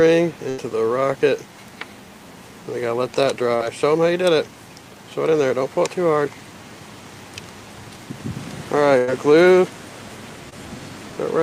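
A burst of packet loss occurs at 0.49 to 0.59 s and again at 8.98 to 9.09 s. In each case a run of the stream failed to arrive in time. The receiver papered over the hole by extending the last sound it had and letting it fade, for about 81 ms and 96 ms respectively. The audio then picks up further along, with roughly 80 ms and 100 ms of material simply gone. Short concealed packet loss appears at 3.55 to 3.62 s and at 10.49 to 10.54 s. These are much smaller dropouts, of about 40 ms and 20 ms. The decoder bridged them by continuing the preceding sound for about 43 ms and 22 ms before crossfading back into the real signal, so each one comes across as a brief smear or wobble rather than an audible gap.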